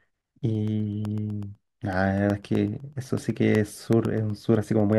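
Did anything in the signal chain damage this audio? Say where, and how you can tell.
Yes, periodic USB or driver dropouts at the driver stage: regular ticks every 0.125 s from 0.05 to 4.93 s, each a roughly half-millisecond silent gap where the bus stalled.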